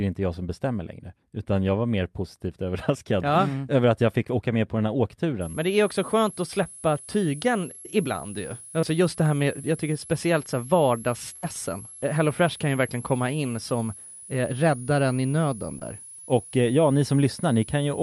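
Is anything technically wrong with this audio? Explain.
Yes. From 5.41 s, just after "med på den här", to the end, a thin high whistle around 10 to 11 kHz sits roughly 20 dB below the speech. This is a switching supply whistle, from a power supply cycling in an audible burst mode.

At 6.63, 7.81, 8.81 and 15.79 s there are brief smears or wobbles where about 20 to 40 ms of audio is patched over. This is short concealed packet loss: the receiver extended the preceding sound to cover the missing audio.

At 11.36 to 11.45 s the sound holds and fades, then resumes with about 60 ms missing. This is a burst of packet loss, where several consecutive packets were lost and the concealment faded out before real audio returned.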